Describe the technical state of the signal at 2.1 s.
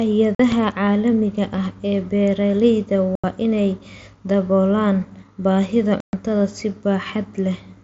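At 2.1 s the speech is intact, with no fault present, and it carries only the light band-limited character of the mSBC Bluetooth headset path it passes through.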